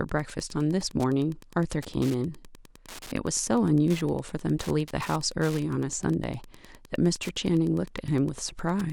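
Wi-Fi interference runs under the speech from start to end. A nearby Wi-Fi radio's signal is being rectified by the audio circuit. Its beacon repeats every 102.4 ms, giving a steady ticking about ten times a second, roughly 25 dB below the speech.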